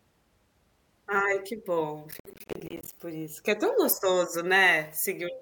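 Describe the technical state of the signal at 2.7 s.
At 2.7 s the signal is inside a burst of processor overload crackle running from 2.11 to 2.93 s. The processor repeatedly fails to deliver its small audio buffers on time, and each missed deadline drops a short stretch of silence into the speech with abrupt edges. The gaps are short and recur densely, which fits buffers of around 10 ms with a few dozen misses, so the speech sounds torn and gritty until about 2.93 s.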